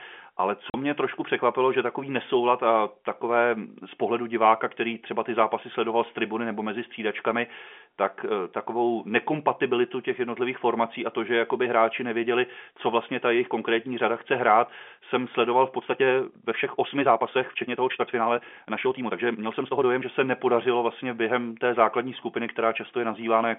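Right near the start, at 0.70 s, there's a short hole in the speech, about 40 ms of dead silence with hard edges. That's packet loss filled with silence: the receiver had nothing for that stretch and just played silence. A 40 ms gap fits a couple of 20 ms packets going missing.

Later, from about 15.75 s to 20.07 s, the pace suddenly jumps to around 1.35 times normal while the pitch stays where it was. That's a time-stretched section, likely the result of software squeezing the audio to fit a set length by dropping short slices and stitching the rest together. You can hear it in how rushed that passage sounds. Throughout, the G.711 telephone coding keeps everything within the usual 200 to 3.4 kHz phone band.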